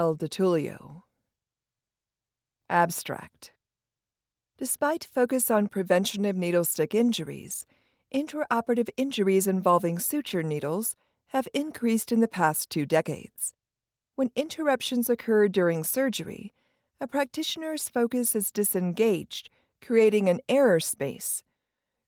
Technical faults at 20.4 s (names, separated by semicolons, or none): none